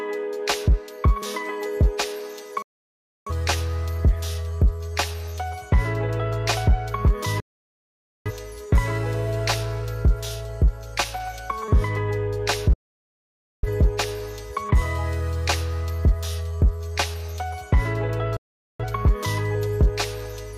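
The sound mutes at 2.62, 7.40, 12.73 and 18.37 s. Each is a digital broadcast dropout. The receiver lost good frames and went silent. A 3 ms fade makes every cut abrupt. Sound returns after 0.64, 0.85, 0.90 and 0.43 s. Whatever was sent in those gaps is gone.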